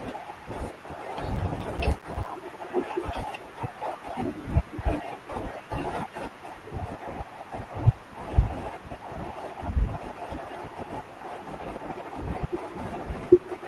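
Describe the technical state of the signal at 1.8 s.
At 1.8 s the speech sits inside a burst of processor overload crackle running from 1.36 to 2.26 s. Around twenty short dropouts fall to silence with hard edges, consistent with roughly 5 ms buffers repeatedly missing their deadlines, producing a gritty, tearing crackle over the speech.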